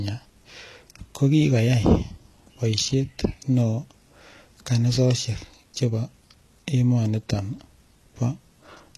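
HE-AAC compression runs through the whole speech clip: the treble is likely rebuilt by spectral band replication, copying lower bands upward, so s sounds turn gritty and metallic, nothing survives above 12.3 kHz, and the plainly audible damage fits a very low bitrate near 16 kbps.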